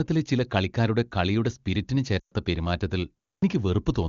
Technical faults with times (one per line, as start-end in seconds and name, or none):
2.20-2.33 lost AMR speech frames
3.38-3.42 clipped start after a pause